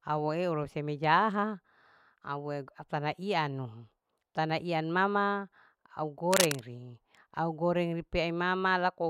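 A speech clip with a burst of harsh scratching and rustling from 6.31 to 6.60 s, roughly as loud as the voice itself. This is cable scratch noise, likely from a worn cable or connector being moved so its contact resistance jumped erratically.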